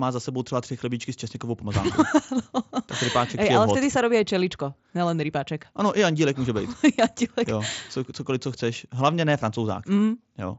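Speech comes through with no technical fault, carried over a Bluetooth mSBC headset link whose band reaches up to about 8 kHz and leaves only the light graininess on louder passages expected of that codec.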